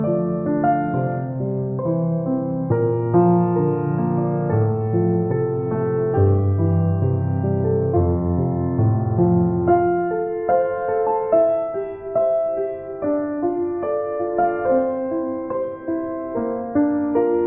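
No technical faults can be heard anywhere in this recording.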